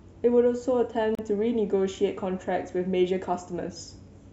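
At 1.15 to 1.19 s, a gap at a join of encoded pieces: untrimmed encoder delay and padding leave a 36 ms gap with smeared edges.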